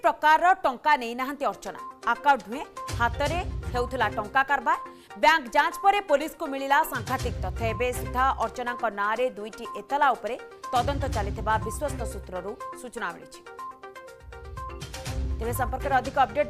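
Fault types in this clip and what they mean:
Hard clipping, 0.07 to 0.51 s: the signal is driven about 2 dB past what a stage can pass, so its peaks are sliced flat, and those squared-off tops add high harmonics heard as a brief crackle on the loudest moments.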